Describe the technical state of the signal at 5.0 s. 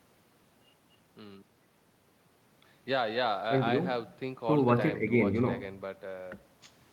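At 5.0 s the speech signal is intact, with no audible fault at that point.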